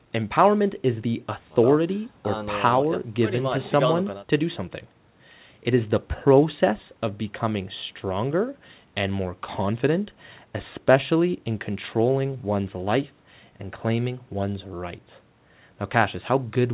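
No audible faults in this speech.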